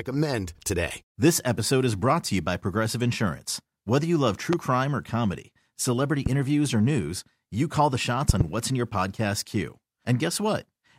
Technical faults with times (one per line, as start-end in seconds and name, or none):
4.53-4.55 loud pop
6.26-6.29 loud pop
8.29-8.43 loud pop